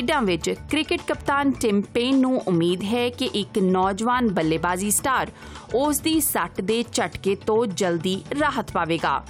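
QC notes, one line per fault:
No faults found. Nothing in the audio needs a timed entry.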